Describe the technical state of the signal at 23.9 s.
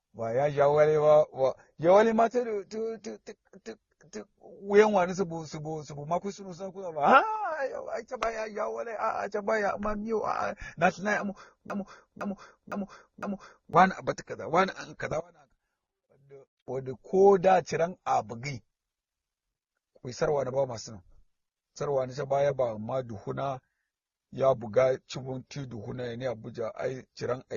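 At 23.9 s the speech carries the same degradation heard through the whole clip: nothing above 6.9 kHz, with a dull, band-limited sound and several different codec artefacts heard together. The likely cause is transcoding between lossy codecs. The mix of textures fits a low-rate AAC-LC stage, then Opus, then MP3, each coding the previous stage's errors and adding its own. On a spectrogram the energy stops flat at 6.9 kHz.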